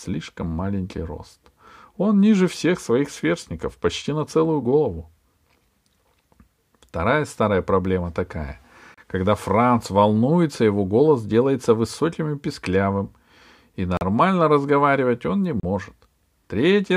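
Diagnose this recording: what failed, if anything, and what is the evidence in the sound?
The speech drops to dead silence three times, and each gap is short. The first runs from 8.94 to 8.98 s and lasts 33 ms. The second runs from 13.97 to 14.01 s and lasts 39 ms. The third runs from 15.60 to 15.63 s and lasts 34 ms. Each time the sound stops cleanly and then resumes. The failure sits at the playback stage, and the likely cause is a Bluetooth stall. Interference delayed packets, so the headphones' buffer ran empty until the retransmitted audio arrived.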